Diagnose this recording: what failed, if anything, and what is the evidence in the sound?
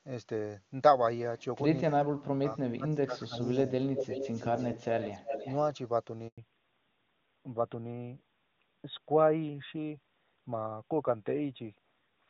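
Speech suppressed in double talk, 1.9 to 3.57 s and 4.73 to 4.87 s: the speech dips by about 30 dB and about 25 dB, likely the call-processing echo canceller clamping both talkers at once.

Echo leak, 3.49 to 3.72 s, 3.95 to 4.71 s and 5.0 to 5.57 s: delayed copies follow the speech at 244 ms, then 320 ms, likely residual loudspeaker pickup reaching about 5 dB below direct speech.

Handover gap, 6.28 to 6.38 s: the speech cuts to 100 ms of silence as the network switches links and delivers no frames during the transfer.

Fallback to narrowband from 6.38 s to the end: everything above 4 kHz disappears and the speech turns duller, which fits a codec switch from AMR-WB at 23.85 kbit/s to AMR-NB at 12.2 kbit/s.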